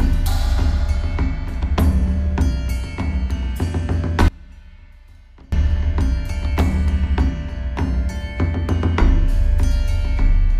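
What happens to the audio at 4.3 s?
At 4.28 s the sound drops out abruptly for about 1.24 s, until 5.52 s. This is an audio dropout to a faint residue. Only a faint sound remains, roughly 25 dB down, likely from the signal being lost while the path stayed live. On a waveform the envelope collapses to a thin band, and a spectrogram shows a sharp-edged, nearly empty block.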